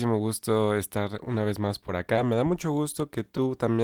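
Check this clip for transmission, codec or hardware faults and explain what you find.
The clip has short concealed packet loss, in four places. The first comes just after "gusto estar" at 1.18 s, the second after "vez más" at 1.87 s, and two more follow back to back at 2.14 and 2.16 s. Each time about 10 ms of speech arrived too late. The receiver extended the preceding sound to cover the gap, then blended back. Each repair is a brief smear or wobble, and the paired losses make a slightly longer wobble.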